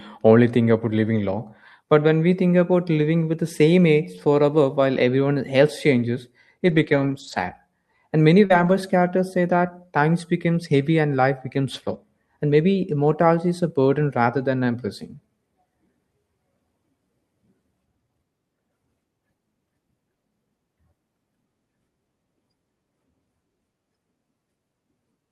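Lost packet rebuilt from error correction first appears at 4.17 to 4.19 s. The missing audio was replaced by a low-bitrate copy carried in the following packet, so nothing drops out, but that brief stretch turns rough and grainy. The same fault recurs at 6.67 to 7.41 s, just after "while everyone else changes." Here it sounds like a series of lost packets across the span, each rebuilt from its coarser duplicate, so roughly 380 ms of the sound becomes noisier.

Short concealed packet loss follows at 8.45 to 8.52 s. About 40 ms never arrived in time, and the decoder filled the hole by extending the preceding sound before blending back, which produces a quick smear. Error-correction rebuilding overlaps it at 8.50 to 8.72 s, just before "characters say that times," and adds about 120 ms of roughened audio. It returns at 10.54 to 10.56 s and again at 11.74 to 11.96 s, just after "heavy and life becomes."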